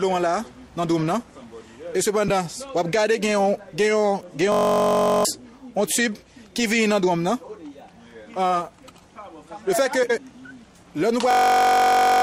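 At 2.28–2.30 s, 7.43–7.49 s and 10.03–10.18 s, frames out of order swap two neighbouring runs of frames, giving a garbled flutter. Unlike a dropout, no time is lost. At 4.52–5.25 s and 11.31–12.22 s, a system hang loop repeats one 21.33 ms piece exactly. That fits a 1024-sample buffer and produces a steady buzz at about 47 Hz. Roughly 0.7 s and 1 s of audio are lost, which tells it apart from the reordering.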